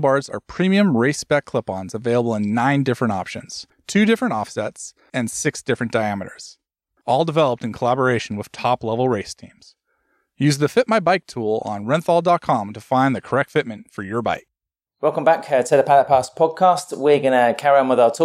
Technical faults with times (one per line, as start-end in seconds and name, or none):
none